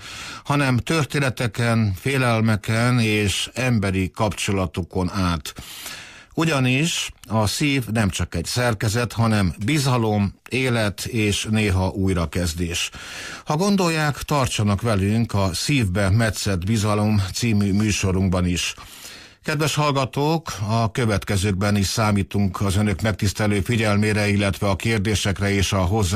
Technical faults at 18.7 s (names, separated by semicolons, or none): none